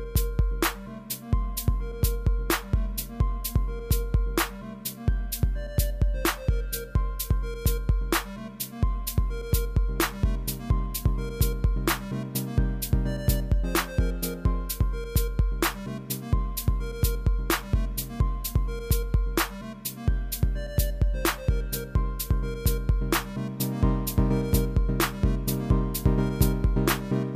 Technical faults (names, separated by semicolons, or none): none